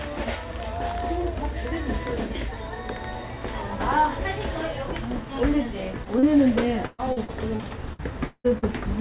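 An everyday-sound recording carried over a call link, with nothing above 4 kHz, which fits a G.711 A-law path. Short concealed packet loss occurs at 6.04–6.07 s and 6.19–6.25 s: audio arrived too late, so the decoder extended the preceding sound to bridge each gap. Each gap is heard as an isolated smear or wobble that blends back in, unlike a dropout, which leaves silence. From 6.86 to 8.64 s, repeated packet loss (robotic sound) sets in. Eight gaps, the longest 176 ms, are each patched before the next arrives, so about 29% of that stretch is synthesized fill. The recurring patches produce choppy sound with pieces missing, distinct from the two isolated blips earlier.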